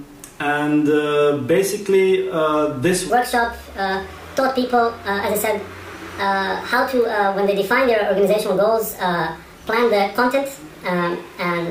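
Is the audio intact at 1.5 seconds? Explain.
Yes, the audio is intact at 1.5 seconds, with no dropout, distortion or other fault audible at that moment.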